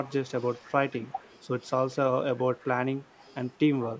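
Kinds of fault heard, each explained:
Echo leak: a faint copy of the speech returns 193 ms later in short scraps, likely a loudspeaker echo canceller leaking, unlike reverb's continuous tail.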